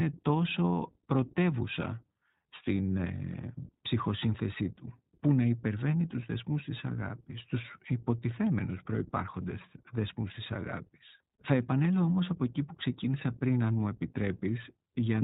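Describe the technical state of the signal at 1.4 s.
At 1.4 s the speech runs through the iLBC codec, as it does across the whole clip, coding each frame's excitation independently in what fits 20 ms blocks at about 15.2 kbps; everything above 4 kHz is gone, leaving plainly audible rough, synthetic narrowband speech.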